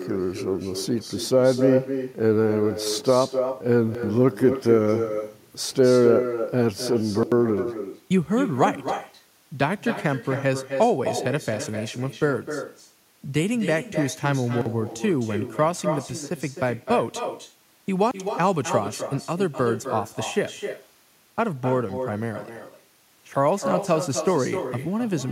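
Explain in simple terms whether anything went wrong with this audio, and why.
Two things went wrong. First, there is an echo with no canceller. The far end played this speech through a loudspeaker, and its microphone caught it again. Nothing removed it. So each phrase returns about a third of a second later, as a quieter, thinner copy.

Second, there are four blocks of digital silence, at 3.95, 7.23, 14.61 and 18.11 seconds. Each time, the sound drops to total silence and snaps back. Most gaps last about 85 milliseconds. The one at 14.61 lasts about 43 milliseconds.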